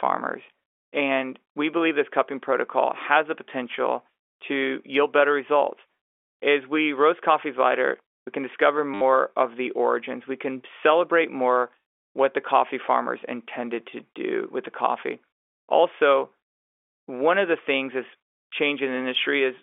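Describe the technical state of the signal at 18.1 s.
At 18.1 s the audio is intact with no fault, the speech simply carrying the narrow band of ordinary G.711 telephone coding.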